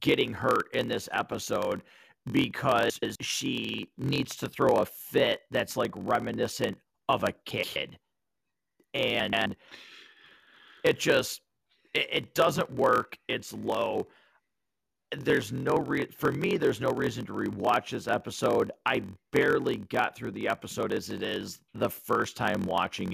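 Speech, with a steady buzz at about 43.1 Hz under the whole recording, and the delivery runs slightly slow, at 0.938 times normal speed, yet at roughly its usual pitch. This is a block size mismatch (padded): one stage writes shorter blocks than the next reads, which fits 1024-sample reads, and the zero-filled remainder of each block adds a short gap at the block rate. At 2.90–3.16 s, 7.50–7.76 s and 9.20–9.46 s, brief garbled flutters interrupt the speech without losing time. These are frames out of order: two adjacent runs of frames, each about 128 ms long, were decoded in swapped order.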